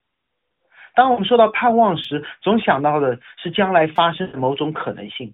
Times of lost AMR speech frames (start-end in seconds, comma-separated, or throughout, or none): 1.12-1.21, 4.22-4.37